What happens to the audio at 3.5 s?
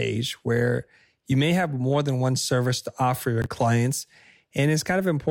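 A 20 ms chunk of audio arrived one chunk late and was played after the chunk that should have followed it, so the chunks out of order span about 3.42 to 3.46 s, just after "one service to offer". No sound is lost, but the two swapped pieces create three hard joins in quick succession, heard as a brief jumbled stutter where the sound seems to skip forward and then back.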